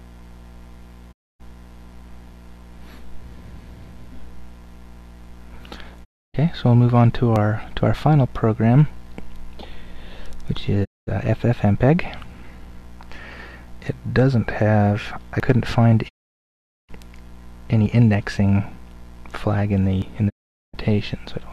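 The digital receiver repeatedly loses the signal or rejects corrupted frames, producing a digital broadcast dropout: it mutes until valid frames return, so the audio fades out over about 20 ms and stays silent from 1.11 to 1.41 s, 6.03 to 6.36 s, 10.83 to 11.09 s, 16.07 to 16.91 s and 20.28 to 20.75 s. The gap lengths fit whole runs of roughly 24 ms frames, and whatever was broadcast during each hole is gone for good. Separately, at 7.36, 15.4, 17.86 and 20.02 s, the audio jumps abruptly forward with no silence, which is likely a dropped buffer (overrun). In that case the software failed to read its samples before the hardware overwrote them, discarding about 20 ms each time, and about 40 ms at 15.4 s, and splicing the surrounding audio together.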